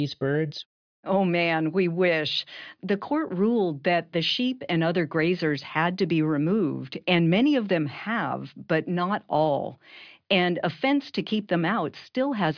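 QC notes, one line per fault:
No fault to note.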